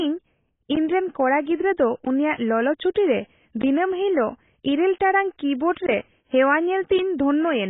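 Throughout the speech, the band stops dead at 3.8 kHz, with nothing above it, and the remaining spectrum sounds heavily damaged: dull, smeared, with a warbling, fizzy texture on sustained vowels and sibilants. This is likely AAC compression, AAC-LC at a very low bitrate, which fits something around 16 kbps. At that rate the encoder lowers its cut-off and starves the bands it keeps, quantising them coarsely against its hearing model.

At 2.94 s a sharp onset is preceded by a burst of hiss about 12 ms long, and the attack itself sounds softened. This is pre-echo. The transform spreads its quantisation noise across the whole block, so when a transient lands late in that block, noise sized for the loud attack also fills the quiet stretch just before it, where nothing masks it.

At 3.62 s the audio drops out for about 17 ms and returns abruptly, with no fade on either side. This is a block of digital silence: a run of zeros was played in place of the audio, either because the output buffer wasn't filled in time or because a calculation produced invalid values. 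At this length it is just long enough to be heard as a short hole rather than only a tick.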